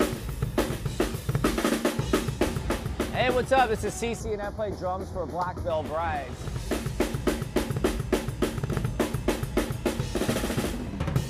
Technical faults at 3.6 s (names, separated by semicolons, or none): none